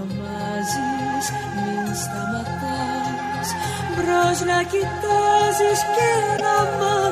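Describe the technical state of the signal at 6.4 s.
At 6.4 s there's a corrupt frame decoded, running from about 6.37 to 6.41 s. A single damaged compressed frame was played anyway, so its energy lands at the wrong frequencies for those roughly 36 ms. You hear a short glitch, peaking around -10 dBFS.

Underneath that, the whole clip carries a watery, swirly texture with smeared attacks. That's likely MP3 compression at a low rate, fitting something near 64 kbps, where the encoder drops weak frequency lines and lets them flicker between frames.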